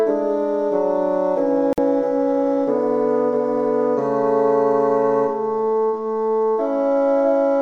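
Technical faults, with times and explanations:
1.73–1.78 s, digital broadcast dropout: the sound cuts abruptly to silence for about 50 ms and resumes further along, consistent with roughly two frames failing and the receiver muting until clean data returned. The waveform shows a flat gap, and the spectrogram a blank vertical stripe.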